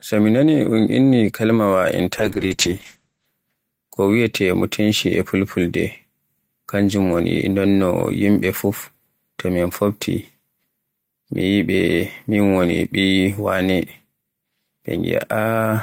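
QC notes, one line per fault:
2.20–3.37 s call bitrate drop: after "nani un inni kalimaawa" the encoder starves, consistent with 32 falling to 9 kbps, coding coarsely with highs cut to 8 kHz until "ko wiyeete".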